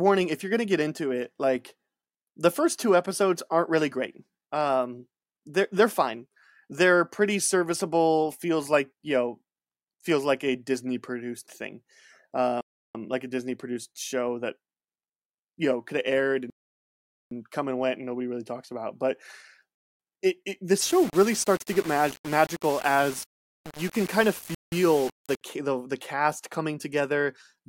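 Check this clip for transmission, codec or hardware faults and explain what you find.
Two kinds of fault appear in this speech clip: three Bluetooth stalls and a stretch of low bit depth without dither.

Bluetooth stall at 12.61 s (about 0.34 s, before "like a"), 16.5 s (about 0.81 s, between "know could have aired" and "come and went and") and 24.55 s (about 0.17 s). Each is likely a buffer running dry while delayed packets were resent. The audio drops to silence, then resumes.

Low bit depth without dither from 20.81 s to 25.41 s, between "it it" and "the the cast". The grainy, signal-following distortion fits roughly 5-bit rounding with no dither, likely the cause. The error sits only about 15 dB below the speech.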